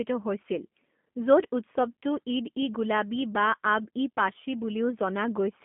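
From start to finish the speech carries G.729 codec damage. Nothing reaches above 3.5 kHz, and the band sits at roughly 200 Hz to 3.4 kHz. Pulse-based excitation rebuilt through a vocal tract filter leaves a plainly rough, synthetic edge, which fits G.729A at 8 kbit/s.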